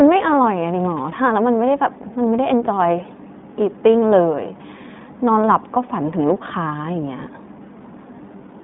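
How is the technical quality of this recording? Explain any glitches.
The speech has a narrow, boxed-in tone and a slightly rough, synthetic grain from start to finish, the signature of the iLBC codec. Nothing reaches above about 3.8 kHz, and the usable band runs roughly from 150 Hz to 3.6 kHz, so sibilants lose their crispness. The roughness comes from coding the excitation of each 20 ms frame independently of the previous one, which fits the 15.2 kbps mode. The damage is plainly audible.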